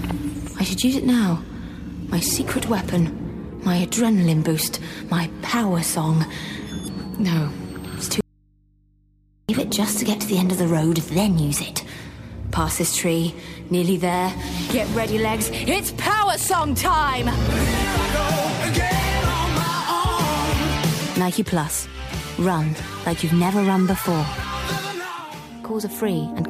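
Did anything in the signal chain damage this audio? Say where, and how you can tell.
Yes. From 8.21 to 9.49 s the sound cuts out abruptly for about 1.3 s, leaving only mains hum some 35 dB below the signal. This audio dropout to a faint residue likely comes from an intermittent analogue connection that left a live, open input behind.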